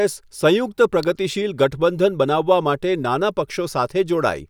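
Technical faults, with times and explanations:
1.03 s, electrical switching spike: a single sharp snap, only a couple of milliseconds long and peaking near -15 dBFS, sits on top of the speech just before "ગઠબંધન બનાવવા". It is likely an arc from a nearby switch or static discharge coupling into the audio line.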